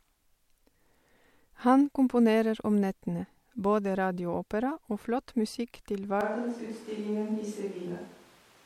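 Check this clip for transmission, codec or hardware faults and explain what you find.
One fault is present, beginning at 6.21 s and lasting to the end of the speech. The voice abruptly turns roomy and hollow, loses its low end, falls by about 5 dB, and picks up background noise roughly 25 dB below it. This is most likely a switch to a distant microphone. The close microphone's feed dropped out, leaving a pickup farther away that hears more of the room. A plain gain drop would lower the level without adding reflections or noise.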